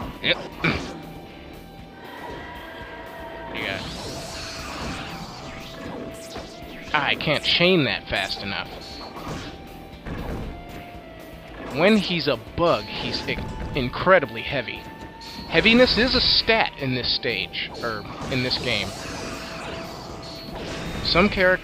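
No technical faults can be heard anywhere in the recording.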